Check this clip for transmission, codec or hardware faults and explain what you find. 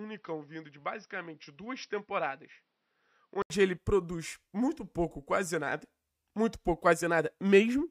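One fault: from the start to about 3.50 s the sound is dull and boxy, with nothing above 5.8 kHz, noticeably quieter (roughly 10 dB down) and carrying its own faint background noise well below the signal. An 80 ms silence at 3.50 s precedes a return to full, clear sound. This is likely an input switched to a poorer device: the recording began on a narrower-band microphone or headset profile, then changed to a better input.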